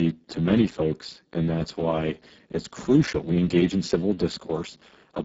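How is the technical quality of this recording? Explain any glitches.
The technical quality is poor. Throughout, the speech sounds hoarse, noisy and edging on robotic, with nothing above 7.7 kHz and only a hissy, noise-like fill above 4 kHz. This is heavy Speex codec damage at a very low setting, which fits a bitrate near 6 kbps. Too few bits remain to model the excitation, so the voice's fine structure is replaced with rough approximation.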